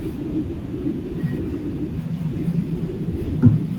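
Nothing stood out on listening to this recording of speech.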